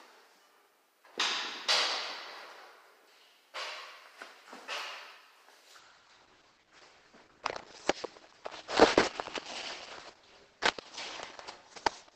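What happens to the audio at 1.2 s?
Nothing goes wrong at 1.2 s: the audio there runs on intact, with no dropout, click or other fault.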